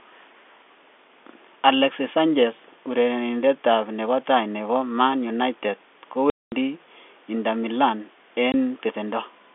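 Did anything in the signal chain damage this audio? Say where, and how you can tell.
Yes, at the network stage: packet loss filled with silence leaves hard-edged gaps in the speech at 6.3 to 6.52 s (220 ms) and 8.52 s (20 ms), fitting 20 ms packets.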